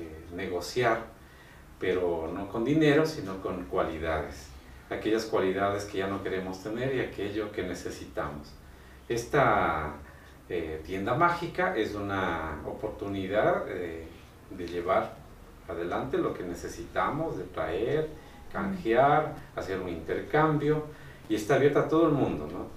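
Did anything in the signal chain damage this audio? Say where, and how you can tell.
No, nothing along the signal chain audibly damaged this audio. No stage, from capture through to playback, leaves a mark that can be heard.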